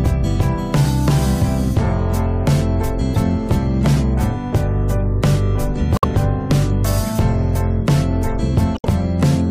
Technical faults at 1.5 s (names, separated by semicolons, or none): none